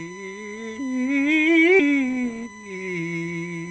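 A USB whine runs through the whole music clip: a steady tone at 1 kHz with its strongest component at the 2 kHz harmonic, sitting about 20 dB below the music. Current drawn in the bus's 1 ms frames is leaking into the audio through power or ground.

At 1.79 s the music skips ahead. Roughly 0.7 s of audio never plays, and the two sides are butted together with no gap. This fits a jitter buffer that discarded queued audio to catch up.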